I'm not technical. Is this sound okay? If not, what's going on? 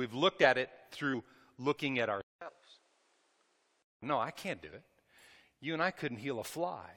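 No. Two problems can be heard.

Compressed frames skipped: the decoder lost small chunks of the stored audio, each a few blocks of about 23 ms. At 1.13 s, right after "looked at it", about a tenth of a second vanishes, and the sound jumps ahead to "looking at". It happens again from 2.47 to 2.49 s, just after "looking at", where roughly 70 ms is missing.

Input switched to a poorer device: between 2.21 and 4.02 s the recording likely changed over to a lower-quality microphone or headset. The change starts with a fifth of a second of silence after "looking at". From there the sound turns duller, with nothing above about 10.8 kHz, drops a little in volume and picks up faint background noise. The fuller sound returns at "no I can't do".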